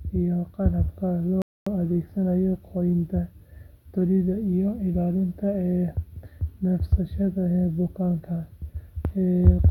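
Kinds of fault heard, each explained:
Rebuffering stall: the player exhausted its store of downloaded audio and had to halt playback until more data arrived. In this speech clip the sound drops to silence at 1.42 s and picks up again at 1.67 s, continuing exactly from the point where it stopped. No material is skipped or repeated; the gap inserts about 0.25 s (246 ms) of extra time into the timeline, lengthening the clip by that amount.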